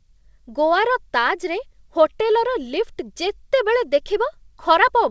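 No technical faults can be heard in this recording.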